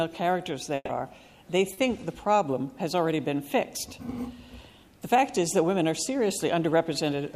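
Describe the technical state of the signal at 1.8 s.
At 1.8 s the signal is just coming out of a short concealed packet loss that runs from 1.73 to 1.79 s. About 40 ms of audio never arrived, and the decoder bridged the gap by extending the preceding sound, pitched or noise-like, before crossfading back. It is heard as a brief smear or wobble. On a spectrogram the harmonics or noise bands run unnaturally flat through the gap, and the waveform shows a smooth, repetitive stretch ending in a blend.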